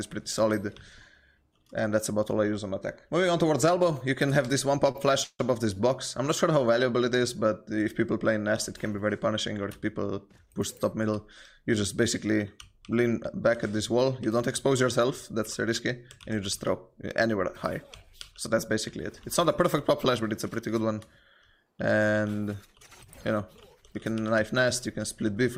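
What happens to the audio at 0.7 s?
Nothing goes wrong at 0.7 s; the audio plays through that moment intact, with no dropout, click, glitch or other fault.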